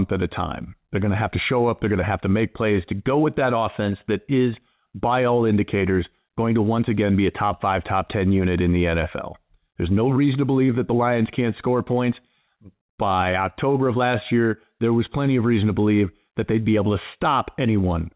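No faults are audible in this speech; nothing sounds above 4 kHz, which fits a G.711 mu-law call path at 64 kbps working as designed.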